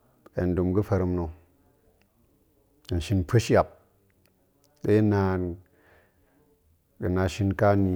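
No technical faults can be heard anywhere in this speech recording. Nothing in the audio stands out as needing a time mark or a closer look.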